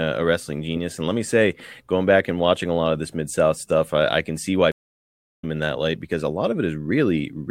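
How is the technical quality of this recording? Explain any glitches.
The recording has one clear glitch. A stream reconnect runs from 4.72 to 5.44 s: after "I can see why" the audio drops to about 0.67 s of silence, then returns at "in that light because", roughly 0.7 s further on. The connection broke, and the player restarted a fresh decoder mid-stream, so that stretch of speech is simply skipped.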